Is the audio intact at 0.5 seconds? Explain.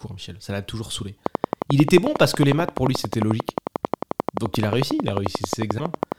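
Yes, the speech at 0.5 seconds is intact, with no dropout, click, distortion or other audible fault at that moment.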